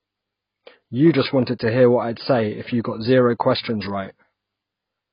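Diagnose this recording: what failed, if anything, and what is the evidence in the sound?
Codec stage: the speech has nothing above 5.1 kHz throughout, likely low-bitrate audio saved at a high bitrate, with the first encoder's cut-off surviving the later MP3.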